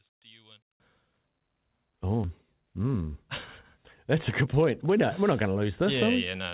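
For the first 0.8 s, the speech drops by about 26 dB to a faint residue. The likely cause is one stereo channel with inverted polarity, so the shared centre content cancels when the two channels are folded to mono.

Between 2.24 and 2.26 s, playback skips ahead. Roughly a second of audio was thrown away while later audio was already queued, and the two sides are spliced with no gap, so the speech jumps abruptly to a later point mid-flow.

From 4.14 to 5.82 s, the jitter buffer speeds up. It had built up more delay than it wanted, so it cut out short pitch-period slices again and again, removing around a fifth of a second. The speech runs about 10% faster at unchanged pitch and sounds hurried. Throughout, the narrowband call codec keeps everything below 4 kHz.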